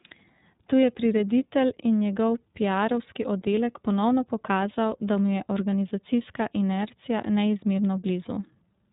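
From start to end the speech carries iLBC codec damage: nothing above about 3.8 kHz, and a plainly rough, slightly synthetic texture. Unlike a clean band limit, each frame's excitation is coded independently, which fits 30 ms frames near 13.33 kbps.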